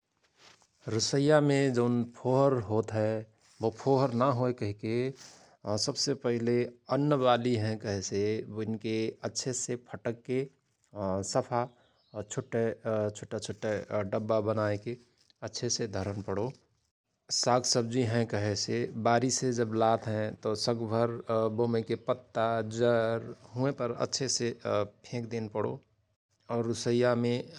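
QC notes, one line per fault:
No faults found in the speech. Nothing in the recording calls for a timed entry.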